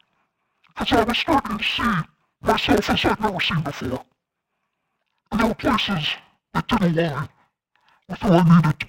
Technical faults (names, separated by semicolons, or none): interleaved audio read as planar